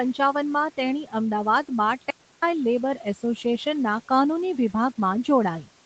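From 1.04 to 1.14 s, the noise suppressor mistook part of the speech for background and turned it down with the room noise, by about 9 dB at its deepest. For roughly a tenth of a second the speech sounds swallowed and faint before returning to its normal level.

From 2.10 to 2.42 s, the input signal was lost for 321 ms, most likely through a dropped link or a momentary mute, while the recording carried on writing silence. The speech cuts out abruptly into total silence, with even the room tone gone, then resumes mid-flow.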